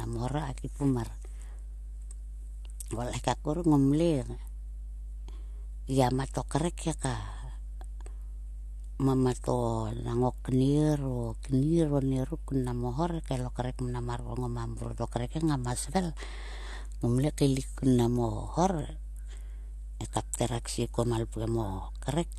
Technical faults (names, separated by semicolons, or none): mains hum